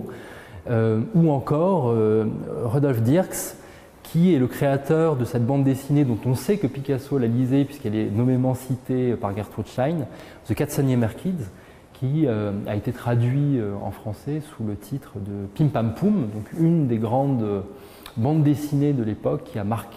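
Nothing here trips me up at all: the audio runs along without a single hiccup, glitch or dropout anywhere I can hear.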